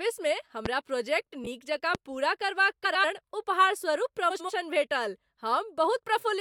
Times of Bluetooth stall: none

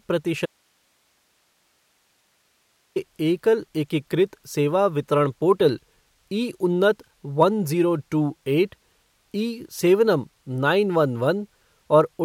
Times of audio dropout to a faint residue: 0.46-2.96

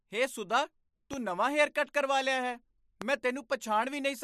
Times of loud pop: 1.13-1.16, 3.02-3.04

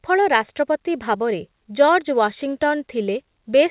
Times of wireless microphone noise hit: none

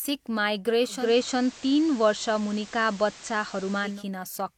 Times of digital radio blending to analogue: 0.88-4.04

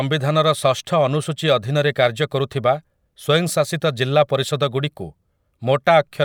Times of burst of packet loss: none

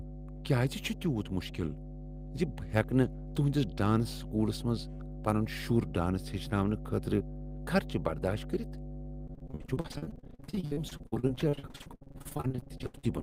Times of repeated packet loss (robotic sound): 9.27-13.05

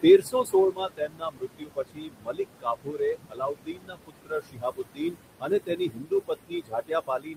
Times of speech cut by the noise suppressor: 0.02-7.37

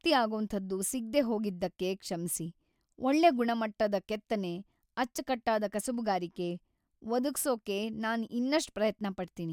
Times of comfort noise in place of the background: none

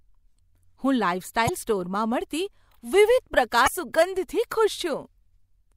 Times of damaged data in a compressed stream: 1.45-1.49, 3.64-3.68

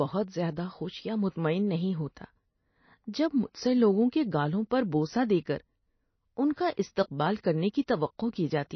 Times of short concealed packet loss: none

